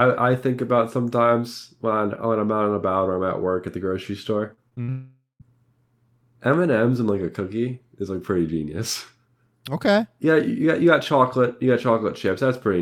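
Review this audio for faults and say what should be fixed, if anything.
Repeated packet loss (robotic sound) runs from 4.53 to 4.90 s, just after "at the grocery store". Four short gaps, the longest 51 ms, were patched by extending the preceding sound, so about a third of that stretch is synthetic, giving a choppy, robotic texture. A larger jitter buffer with forward error correction would prevent it.

A long network dropout follows from 4.90 to 5.42 s. About half a second of audio never arrives; the last sound is stretched into a fading buzz or hiss, then about 150 ms of silence before audio resumes with that portion gone. This is likely a network outage on the link. Redundant transmission or a more stable connection would prevent it.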